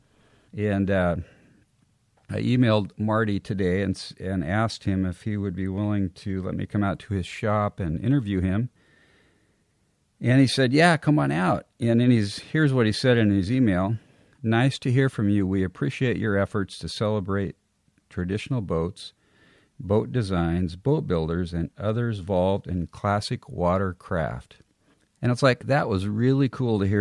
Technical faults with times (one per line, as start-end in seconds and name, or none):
none